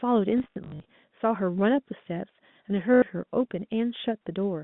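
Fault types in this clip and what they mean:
packet loss with last packet repeated: lost audio is refilled by replaying the previous packet, so instead of silent gaps it buzzes robotically at 50 Hz, fitting 20 ms packets.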